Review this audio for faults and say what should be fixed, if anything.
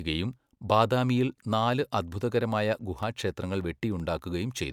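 CD scratch ticks: eight ticks of up to about 4 milliseconds, about six a second, from 2.83 to 4.19 s. The even once-per-revolution spacing sets them apart from random digital clicks. Cleaning the disc or re-ripping in secure mode would recover the samples the player had to interpolate or mute.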